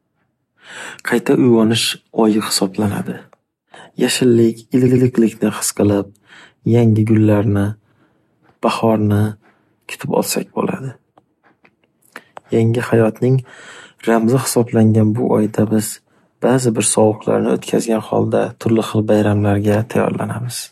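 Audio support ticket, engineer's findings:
Repeated frames, 4.88–5.07 s, before "his qilib": one 96 ms block plays twice more, stuttering. Likely frames resent upstream of the decoder; adds 192 ms.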